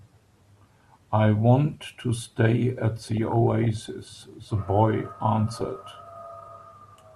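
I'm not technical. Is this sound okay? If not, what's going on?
No. DAB burbling at 3.07 to 3.89 s and 5.58 to 5.83 s: weak digital-radio reception corrupts the speech with short blips of noise and brief jumps in level, not steady FM-style hiss.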